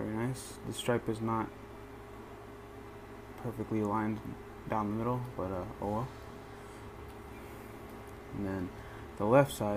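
Three brief jumps in the sound occur at 2.28, 7.29 and 8.17 s, likely dropped buffers (overruns), losing a few milliseconds at the first and roughly 10 ms at the others. The waveform shows abrupt discontinuities; the spectrogram, thin vertical broadband lines.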